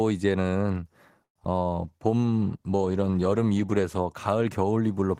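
At 1.23 to 1.36 s a call audio freeze stretches the last sound briefly, then drops to about 90 ms of silence before resuming. Nothing is lost, unlike packet loss; late packets likely emptied the jitter buffer.

Short concealed packet loss follows at 1.39 to 1.42 s and at 1.45 s. About 10 ms of real audio is missing each time, filled by a continuation of the last sound that is heard as a brief smear or wobble.

From 1.83 to 5.10 s a call bitrate drop from 32 to 18 kbps, lowest for about 2 s, makes the coding coarse and rough. This is a sustained change in texture, not a momentary glitch.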